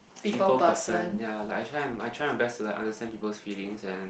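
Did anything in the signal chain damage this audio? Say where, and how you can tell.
No, nothing in this speech clip stood out on listening as damage from any stage of the chain.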